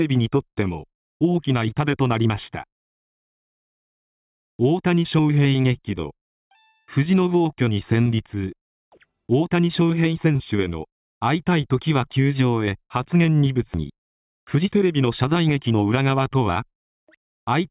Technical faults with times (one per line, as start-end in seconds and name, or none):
none